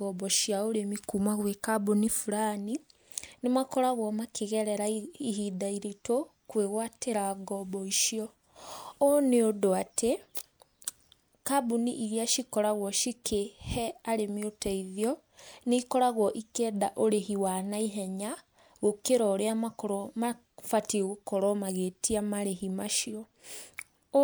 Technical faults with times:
none

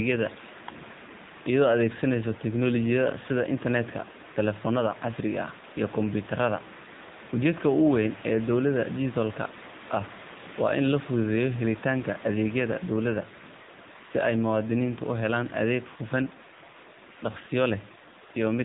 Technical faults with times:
0.00-18.64 AMR narrowband mobile codec

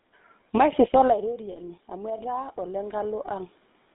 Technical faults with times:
0.00-3.95 GSM full-rate codec
0.59-3.60 automatic gain rising
1.52-1.58 lost GSM frames
3.26-3.29 lost GSM frames

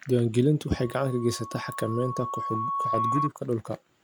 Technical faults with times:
0.71-3.30 loudspeaker feedback squeal

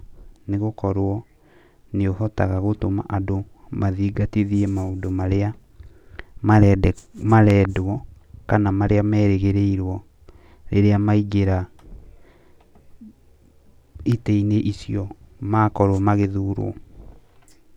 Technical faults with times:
7.50-7.67 loud pop
14.12-14.14 loud pop

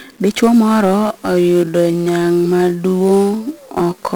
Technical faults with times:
0.00-4.15 1-bit DFPWM compression
0.83-4.15 time-stretched section

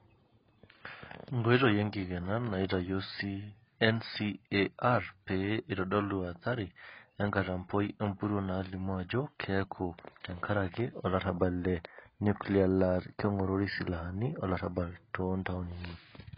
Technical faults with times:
0.00-16.37 AAC compression

